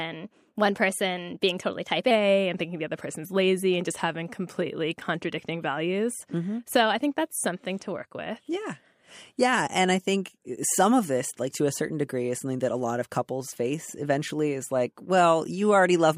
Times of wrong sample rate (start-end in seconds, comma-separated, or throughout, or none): 0.00-2.11